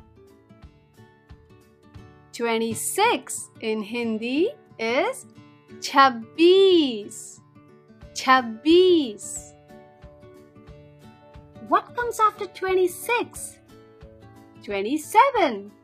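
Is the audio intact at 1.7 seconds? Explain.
Yes, at 1.7 seconds the audio is intact, with no dropout, click, distortion or other fault to be heard at that moment.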